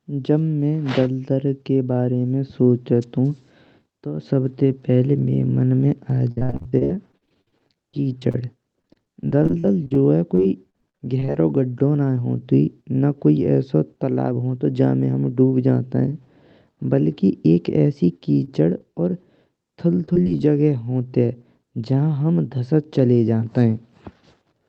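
Speech carried over a call link whose band stops near 8 kHz, with several distinct faults. At 6.10 s a DC step shifts the waveform's zero line and the offset holds to the end. It is heard as a single low thump while the speech continues untouched, which separates it from a dropout or packet click. From 6.31 to 11.36 s repeated packet loss gives a robotic, choppy sound. Dozens of gaps, the longest about 55 ms, are each patched by extending the last sound, so roughly a fifth of that stretch is synthetic buzz. The repetition is what sets it apart from one isolated loss. A shorter burst of the same kind, four gaps with the longest 23 ms, roughs up 20.06 to 20.42 s. Between 13.25 and 14.58 s a jitter buffer speed-up plays the audio about 5% fast by trimming roughly 70 ms in pitch-period slices. The speech sounds hurried, but unlike a resampling error its pitch stays put. At 18.44 to 18.62 s a short stall from a late packet stretches one sound by about 29 ms while the buffer waits. 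Nothing is lost, which distinguishes it from the short concealed packet loss just after, at 18.78 to 18.82 s. There about 20 ms never arrived and was filled with a brief smear, so a sliver of sound actually disappears.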